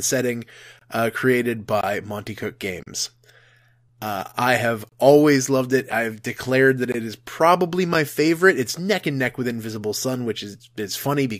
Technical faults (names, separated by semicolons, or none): gap between stream segments